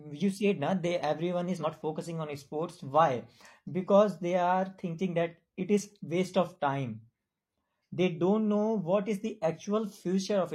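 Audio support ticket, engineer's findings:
Compressed frames skipped at 1.56–1.65 s, just before "focusing on sports". Speech jumps ahead by about a tenth of a second. Probable component: decoder or damaged file. Whole frames missing or rejected, audio spliced across the gap. Spectrogram: abrupt discontinuity in harmonic tracks. Waveform: envelope jumps without a gap.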